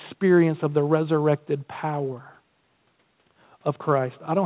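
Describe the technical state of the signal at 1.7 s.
At 1.7 s the speech is intact, with no dropout, click or distortion, only the narrow telephone-band sound of the call codec, which leaves nothing above 4 kHz.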